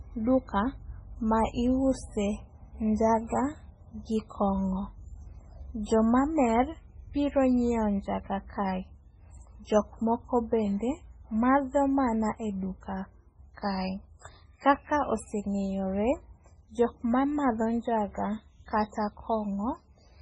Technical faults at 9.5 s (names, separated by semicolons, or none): MP3 compression